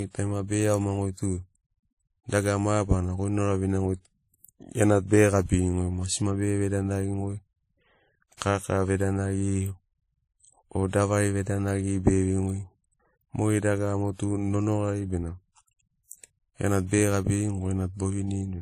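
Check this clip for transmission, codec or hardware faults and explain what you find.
One codec fault runs through the whole speech clip: transcoding between lossy codecs. Nothing is present above 15.2 kHz. Two kinds of compression damage are heard together, the artefacts of one codec layered on those of the other. That mix is most likely an MP3 at roughly 43 kbit/s re-encoded as WMA at roughly 48 kbit/s, with the later encoder spending bits on the earlier damage. A single low-bitrate encode would show one consistent artefact character, not two overlapping ones.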